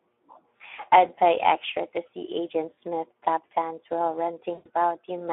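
The Speex codec colours the whole clip. The speech is confined to a phone-like band of 300 Hz to 3.5 kHz. Too few bits reach the excitation, which fits a bitrate near 11 kbps. The voice sounds plainly hoarse and grainy throughout.

At 2.74 s, VoIP packet loss concealed by the speech codec sets in. Roughly 40 ms of audio goes missing. The decoder repeats its last pitch and filter, so the sound is stretched into a short buzzy tone or coloured noise. A longer dropout follows from 4.53 to 4.69 s, about 120 ms. There the extrapolated sound fades. The voice stays weak briefly after packets resume.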